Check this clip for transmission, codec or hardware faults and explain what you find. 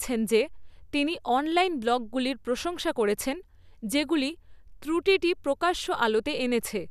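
Nothing in the speech points to a transmission, codec or hardware fault.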